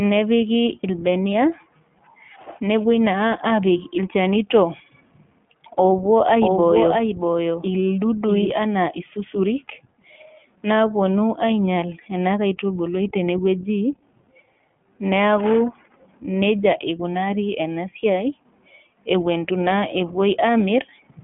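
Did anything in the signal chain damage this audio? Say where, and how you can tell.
Yes. The codec stage did. The iLBC codec shapes the whole clip. Nothing passes above 3.7 kHz, within a 150 Hz to 3.4 kHz line band. The speech sounds rough and synthetic throughout. Independent 20 ms frames fit the 15.2 kbps mode.

A doubled audio track runs from 6.25 to 8.51 s. A full-band copy trails by roughly 0.7 s, about 5 dB quieter. It has no decay or room colour and starts and stops abruptly. A second, slower capture path is the likely cause.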